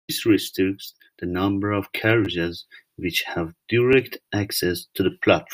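At 2.25 to 2.27 s, and again at 3.93 s, the speech shows a repeated buffer: fresh audio failed to reach the output in time, so the device replayed the last 10 ms block. It plays twice more at 2.25 s and once more at 3.93 s, giving a brief buzzy click rather than a stutter, with no audio lost. The waveform shows identical 10 ms segments butted together with hard steps at each join. The spectrogram shows thin vertical lines at those edges.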